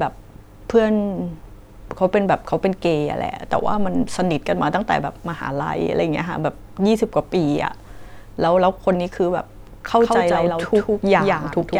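From 9.88 s to the end, a doubled audio track appears: a full-band copy of the speech trails by about 150 ms, some 5 dB quieter, likely from a second, slower capture path. It enters abruptly, and the spectrogram shows every syllable repeated as a fainter, shifted twin.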